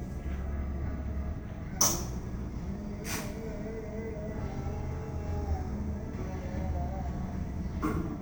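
A recording of sounds that plays throughout as stereo read as mono. Its interleaved left and right samples have been taken in sequence as one channel, so every event runs at 0.5x speed and sits a full octave, 12 semitones, below where it should. On a waveform, transients look stretched to twice their proper width. A spectrogram shows the real content squeezed into the lower half of the frequency range, with a fainter mirror image of it reflected into the upper half.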